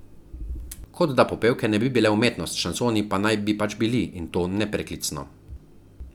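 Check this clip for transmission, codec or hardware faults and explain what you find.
No transmission, codec or hardware faults turn up in this clip.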